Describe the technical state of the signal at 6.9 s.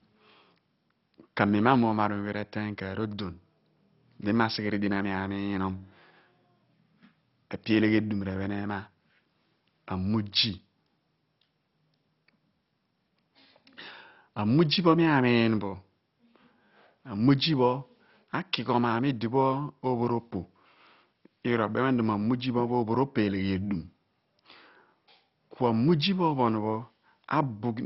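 At 6.9 s the speech has that dull, gurgly, granular quality of heavy MP2 compression, and it runs through the whole clip. It's likely a starved Layer II encode, fitting about 32 kbps: upper sub-bands switch off, leaving nothing above 5.6 kHz, and the surviving bands flicker and sound coarsely quantised.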